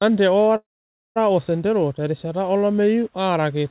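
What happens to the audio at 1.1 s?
At 1.1 s the audio is inside a call audio freeze from 0.56 to 1.18 s, likely from the jitter buffer running empty. A brief fading buzz or hiss gives way to about 0.52 s of silence, visible as a flat waveform and a blank spectrogram band, before the sound resumes where it stopped.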